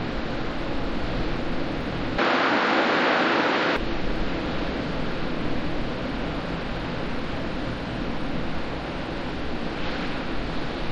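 From 2.18 s to 3.76 s the sound abruptly turns duller, with nothing above 7.6 kHz, and then clears again. The switch is seamless, with no gap, but the level shifts by roughly 5 dB and a faint new background noise appears well beneath the sound. This is likely an input switched to a poorer device. A simple low-pass filter or codec bandwidth drop would remove the top end without altering the level and noise floor like this.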